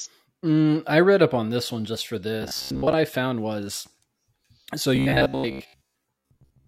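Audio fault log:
2.42–2.93 s and 4.96–6.67 s, robotic sound from repeated short buffers: new audio likely arrived too seldom, so playback kept re-sending the last 15 ms chunk while most of the real speech, roughly two thirds or more, was dropped. Each loop imposes a fixed 66.7 Hz buzz, so the speech after "this one just for" and up to "I found was", and again at the end, becomes a stiff metallic drone that only loosely tracks the words.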